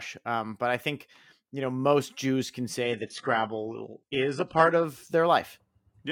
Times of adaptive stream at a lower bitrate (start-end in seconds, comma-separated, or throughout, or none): 2.83-4.83